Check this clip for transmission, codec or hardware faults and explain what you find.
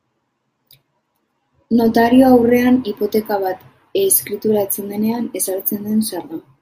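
Nothing faulty can be heard anywhere in this recording.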